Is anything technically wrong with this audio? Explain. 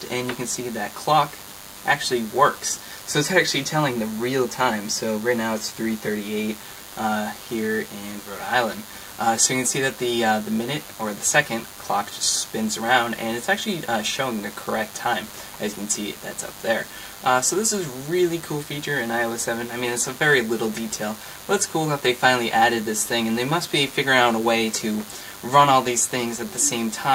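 Yes. Throughout the clip there is DECT cordless phone buzz: a nearby DECT handset or base transmits a radio burst every 10 ms, which the audio circuitry rectifies into a steady, thin 100 Hz buzz rich in harmonics, sitting roughly 20 dB below the main sound.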